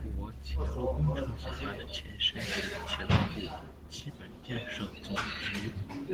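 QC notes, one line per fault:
Throughout: Opus voice compression. The speech sounds hoarse and faintly robotic, consistent with a hybrid mode near 16 kbps. Linear-prediction coding below 8 kHz is coarse, and the thin high band above shows as blotchy, smeared patches stepping in roughly 20 ms frames on a spectrogram.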